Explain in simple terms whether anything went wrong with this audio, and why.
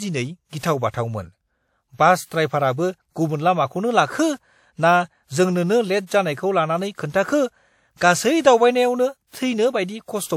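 Pre-echo is audible three times: from 0.49 to 0.53 s, 0.58 to 0.63 s, and 2.26 to 2.31 s. The compression spread its noise across short blocks of sound, so a short hiss of 35 to 58 ms arrives just before sharp attacks, softening them.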